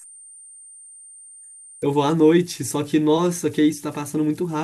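Speech, carrying converter idle tones throughout: a whistle around 10 kHz sits in the pauses and turns into grainy noise under the quieter passages, at about 26 dB below the signal. The cause is an undithered delta-sigma converter falling into repeating bit patterns whenever its input is small. Unlike a fixed interference whine, the tone's pitch follows the input's DC offset, and it lives mainly in the low-level moments rather than holding steady at full level.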